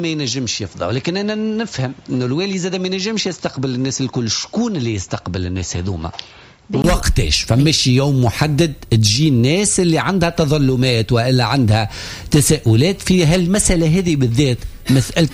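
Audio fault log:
0.00–6.84 s, input switched to a poorer device: the sound is band-limited, with nothing above 7.6 kHz, so it comes across dull and boxy. It sits about 5 dB lower and carries a noise floor roughly 40 dB below the signal. At 6.84 s there is a 20 ms gap, after which the full bandwidth and level return. This is likely a change of capture device, from a narrower, noisier input back to the main one.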